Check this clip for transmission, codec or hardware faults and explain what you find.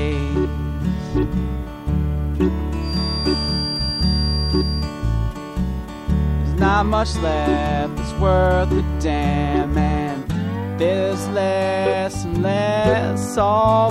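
One fault is present: a feedback whistle from 2.78 s to 4.95 s. A thin, steady tone at 4.7 kHz sits behind the sound, swelling and fading slowly in level and staying roughly 10 dB below the main signal. The likely cause is a loudspeaker-to-microphone loop running just at the edge of feedback, where the gain around the loop is high enough to sustain one frequency but not high enough for it to build into a runaway howl.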